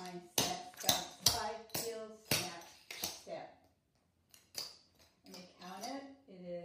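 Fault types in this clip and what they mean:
Nothing stood out as a technical problem on listening.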